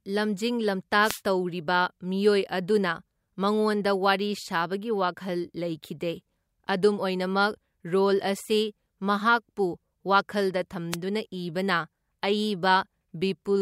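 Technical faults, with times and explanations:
1.01–1.21 s and 10.91–10.96 s, wireless microphone noise hit: two short bursts of static swish over the speech, the first lasting about 0.2 s and the second under 0.05 s. Each is a moment where the radio link from an analogue FM microphone faded as reflected signals cancelled, so receiver noise rose. On a spectrogram each shows as a broadband vertical smear of hiss. On the waveform it is a dense, noisy patch.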